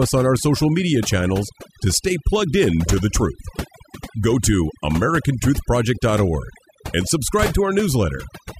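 From start to finish the speech carries overdone noise removal. A noise reduction stage was pushed too hard, so any frequency band sitting near its noise estimate gets pulled far down or shut off, taking the quieter parts of the voice with it. The background drops and breaks up into twinkling specks. On a spectrogram, the gaps appear as blank regions scattered with isolated bright points.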